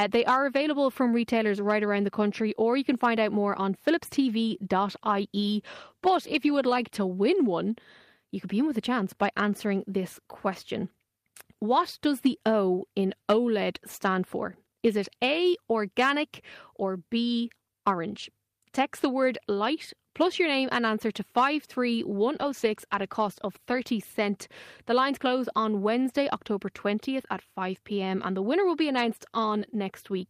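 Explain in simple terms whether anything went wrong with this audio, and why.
Twice, the speech loses quality for a moment. This is a call bitrate drop. The call judged its connection was getting worse, so the sound was squeezed into far less data. The speech turns rougher and duller while that lasts. The first dip runs from 4.78 to 7.45 seconds, just before "one you could be", and is worst for about 1.9 seconds. The second runs from 22.35 to 23.95 seconds, worst for about 1.5 seconds.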